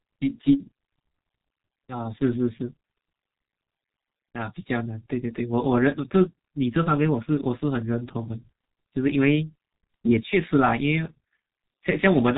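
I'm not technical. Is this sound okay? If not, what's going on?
No. The whole clip passes through the G.723.1 codec, an old internet-phone format. Nothing above 3.8 kHz survives, so speech sounds muffled and hoarse, with smeared consonants.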